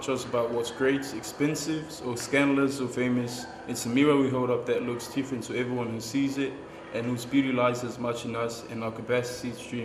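Nothing in the audio stood out as a technical problem on listening.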